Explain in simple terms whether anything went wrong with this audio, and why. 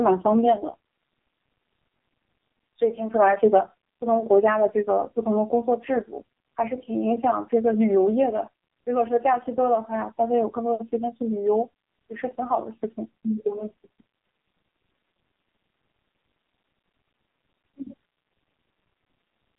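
Yes, something went wrong: the speech passed through an AMR narrowband mobile codec, the old phone-network squeeze, heavily compressed. It keeps only the range from about 150 Hz to 3.7 kHz and nothing above 3.8 kHz, so from start to finish the voice sounds muffled, buzzy and synthetic.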